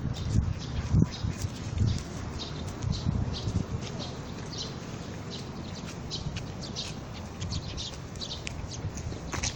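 Nothing here stands out as a technical fault; the sounds in the recording come across just as they should, with no glitches to point to.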